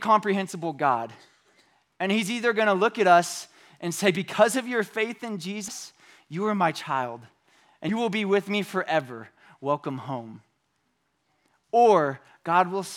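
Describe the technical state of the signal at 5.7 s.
At 5.68 s, right after "of your faith in", compressed frames are skipped. Roughly 150 ms jumps ahead, which fits about four 32 ms frames. It leaves an abrupt jump in the speech, not a silent gap.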